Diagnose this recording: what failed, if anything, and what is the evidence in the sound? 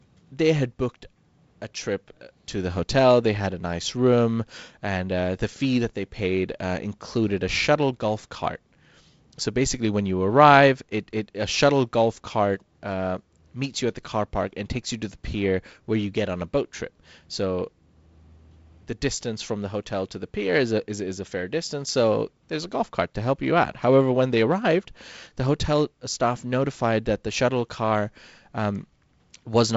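Nothing's broken here: the speech just rides on G.722 wideband telephone coding, with content stopping around 7.7 kHz, a faint hiss up top and a slightly grainier lower band that fits the 48 kbit/s mode, which is simply how that codec sounds.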